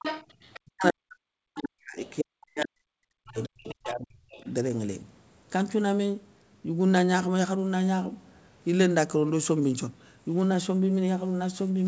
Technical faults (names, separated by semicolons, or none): other side's voice leaking through; speech suppressed in double talk